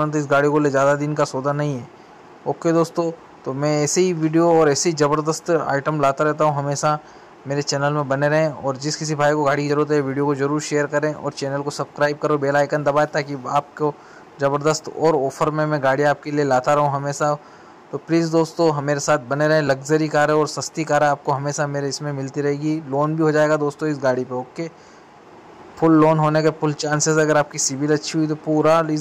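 A recorder likely losing audio between 10-second chunks drops about 20 ms at 9.70 s and 19.68 s, splicing both sides together into brief skips.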